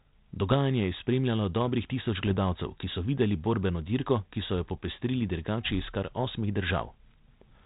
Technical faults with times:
0.51-0.54 bit errors on an ADPCM link
2.27-2.34 bit errors on an ADPCM link
4.76-4.86 bit errors on an ADPCM link

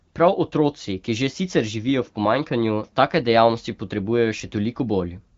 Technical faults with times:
none

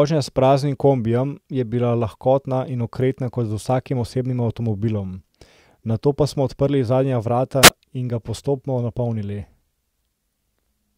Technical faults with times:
7.62-7.70 wireless microphone squelch dropout

